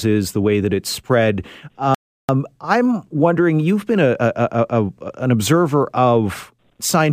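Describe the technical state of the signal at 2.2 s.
At 2.2 s the speech sits inside a playback stall running from 1.95 to 2.29 s. The sound stops mid-flow and the output goes silent for about 0.34 s. The likely cause is the player running short of data or its thread being blocked before output resumes.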